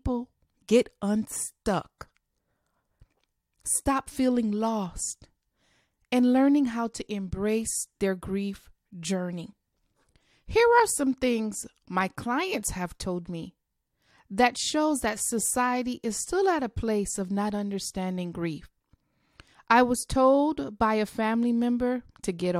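Nothing stood out as a technical fault on listening to this speech recording.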